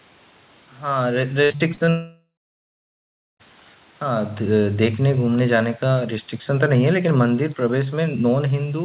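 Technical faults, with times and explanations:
1.44–1.89 s, repeated packet loss (robotic sound): Packets kept going missing in this stretch, and the receiver patched each hole by stretching out the last bit of audio it had. There are five holes, the longest about 58 ms, and together they cover roughly 38% of the span. Short patches and real audio alternate quickly, so the speech turns choppy, with pieces clipped out of it.
1.89–3.41 s, long network dropout: The speech stops for about 1.5 s. The last sound is held briefly as a fading buzz, and then roughly 1.1 s of near-silence follows. When the speech returns, it picks up further along with the missing stretch simply gone. This pattern is most likely a network outage in which no audio reached the receiver.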